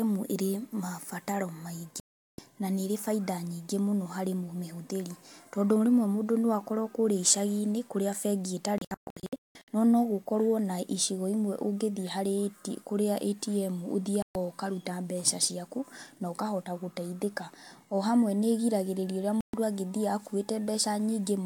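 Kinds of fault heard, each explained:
Digital broadcast dropout: at 2.0, 8.8–9.7 (several short holes), 14.2 and 19.4 s the receiver mutes on failed frames, silencing speech before "na nĩĩri" and "ũkaruta mbeca".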